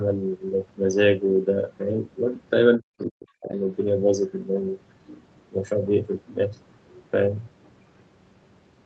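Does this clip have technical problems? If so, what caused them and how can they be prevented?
Yes. From 2.78 to 3.54 s the speech sinks sharply, at its deepest by something like 40 dB, so across roughly 0.7 s it thins out or vanishes in pieces. The likely cause is speech suppressed in double talk: with both ends talking at once, the echo canceller could not separate the local talker from the loudspeaker echo and turned both down. Better double-talk detection in the echo canceller, or a headset that keeps echo out of the microphone, prevents it.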